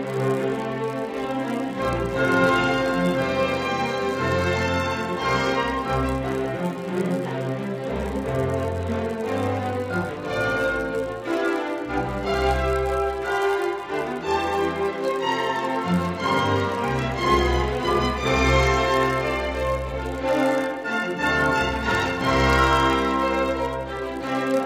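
A 100 Hz buzz, present only with sound, runs throughout: the resampler restarted on every block, erring at each 10 ms edge, which appears as evenly spaced vertical spectrogram lines.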